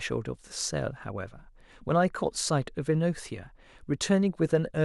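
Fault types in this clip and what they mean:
No technical fault can be heard anywhere in the speech signal.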